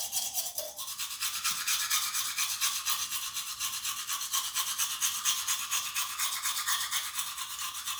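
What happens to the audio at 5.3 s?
At 5.3 s the audio is intact, with no fault of any kind at that moment.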